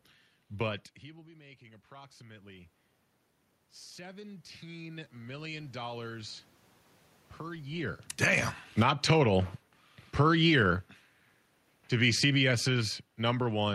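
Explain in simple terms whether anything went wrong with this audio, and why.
Automatic gain rising happens from 1.08 to 2.78 s, 3.95 to 6.41 s and 8.3 to 9.57 s: the level control decided things were too quiet and slowly turned everything up, room noise included. Automatic gain falling goes the other way from 7.72 to 9.09 s, 10.05 to 10.8 s and from 11.9 s to the end: it judged the sound too loud and gradually pulled voice and background down together. The level shifts near 0.5 s and 7.5 s are just the talker moving relative to the mic.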